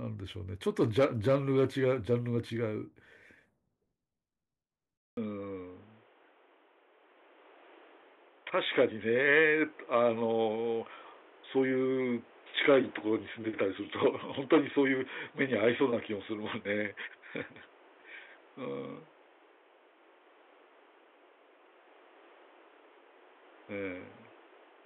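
At 4.97 s the speech cuts out for 200 ms, then returns dull and boxy with nothing above 3.8 kHz and a new noise floor about 30 dB down at unchanged level, likely an input switched to a poorer device. The spectrogram shows a gap, then a flat ceiling.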